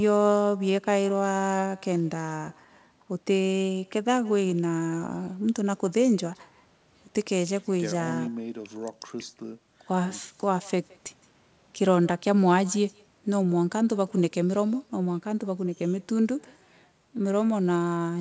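Speech, and the whole clip carries an echo with no canceller: every phrase gets trailed by a faint, thinner copy of itself roughly 150 ms later, sitting about 27 dB below the direct sound. That's the far end's loudspeaker feeding back into their mic with nothing subtracting it, so the talker's own audio makes the network round trip and lands back in the stream. The audio also tops out at 8 kHz, which fits a wideband call codec like G.722.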